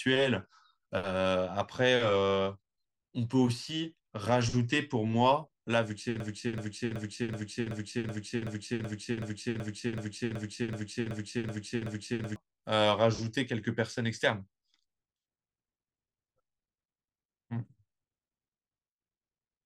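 Speech clip with a broken-record loop from 6.20 s to 12.36 s. A 0.38 s fragment repeats exactly, back to back, 16 times. The speech that belonged in that stretch is lost. The likely cause is a stalled player, encoder or stream resending its last buffered piece.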